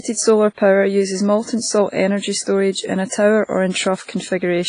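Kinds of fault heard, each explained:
WMA compression: The speech has a washy, ringing quality, with hiss that rises and falls with the signal and nothing above 10.1 kHz. Heavy damage like this likely comes from a WMA transform encoder at a low bitrate, around 24 kbps.
Pre-echo: The transform spreads quantisation noise across each block, so hiss from a loud onset leaks into the quiet just before it. This softens and smears five attacks, at 0.54, 2.43, 2.72, 3.70 and 4.03 s, with the smear lasting 36 to 53 ms.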